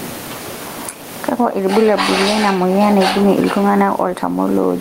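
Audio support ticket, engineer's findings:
Gain pumping, throughout the speech clip. Likely cause: input gain set far too high, with a fast limiter or compressor clamping down on each loud syllable. Gain swing of around 15 dB. Loud and soft passages pulled together, so delivery sounds squashed. Room noise sits about 29 dB below speech.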